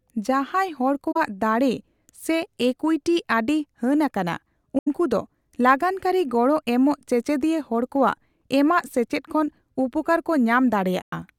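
At 1.11 to 1.17 s, 4.78 to 4.88 s and 11.02 to 11.13 s the speech drops into short silent holes, roughly 43, 85 and 107 ms long. That's AAC frame loss with muting: the decoder zeroed the missing frames' spectrum, and the overlapping windows fade the sound out and back in around each gap. The lengths fit runs of about two, four and five lost frames.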